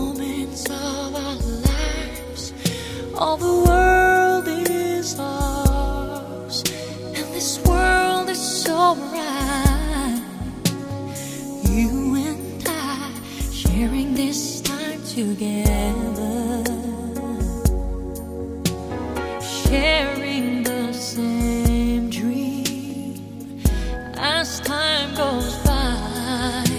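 No technical faults can be heard anywhere here.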